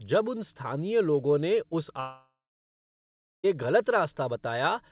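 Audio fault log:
2.00–3.45 s, long network dropout: audio likely stopped arriving for 1.44 s after "स्थानीय लोगों ने उस". The receiver stretched the last sound into a short fading buzz, then 1.12 s of silence follows before speech returns with that stretch lost.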